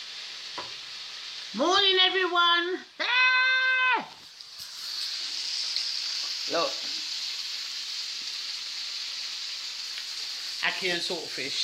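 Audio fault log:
No technical faults can be heard anywhere in the signal.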